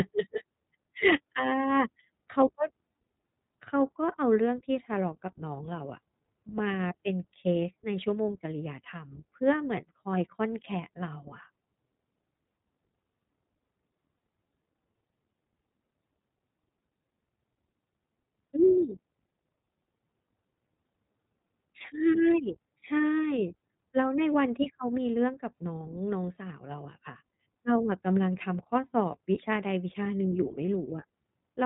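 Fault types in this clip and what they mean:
iLBC codec: a narrowband voice codec that codes the excitation of each short frame independently of the frame before, trading fidelity for robustness to lost packets. Here the speech is band-limited with nothing above 3.8 kHz, giving a muffled, telephone-like tone. The codec damage is plainly audible throughout as a rough, slightly synthetic texture on the speech, which fits the 20 ms frame mode at roughly 15.2 kbps.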